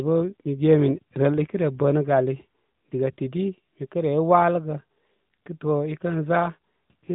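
AMR narrowband mobile codec damage runs through the whole speech clip, from start to finish. The sound has been squeezed through a phone-style coder that samples at 8 kHz and rebuilds speech from a vocal-tract model fed by a handful of pulses per 5 ms subframe. Nothing above about 3.8 kHz survives, so sibilants lose their edge and the tone turns boxy, with a plainly audible buzzy, synthetic quality that fits a mid-rate 10.2 kbps mode.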